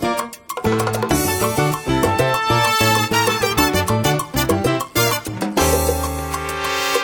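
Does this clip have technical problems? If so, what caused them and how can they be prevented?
Yes. A wrong sample rate runs through the whole clip: everything plays 1.5 times too fast and about 7 semitones high, which fits audio recorded at 32 kHz being played at 48 kHz without conversion. Prevent it by resampling to the device rate.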